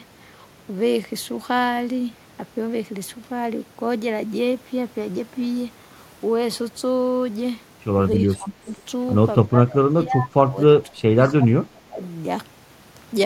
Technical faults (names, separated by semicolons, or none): speech suppressed in double talk; echo leak